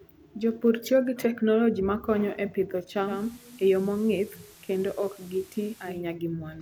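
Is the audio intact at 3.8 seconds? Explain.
No. From 3.0 to 6.05 s, after "teknoloji makonyo e pidho", digital radio blending to analogue cross-fades to FM over 228 ms: level drops about 3 dB, and hiss appears about 25 dB below the signal.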